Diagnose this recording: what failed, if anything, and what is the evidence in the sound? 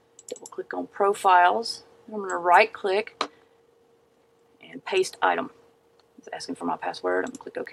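A time-stretched section runs from 2.97 s to the end at 7.73 s: the pace abruptly jumps to about 1.35 times faster while pitch holds steady, sounding rushed. This likely comes from software processing that dropped short segments to compress duration.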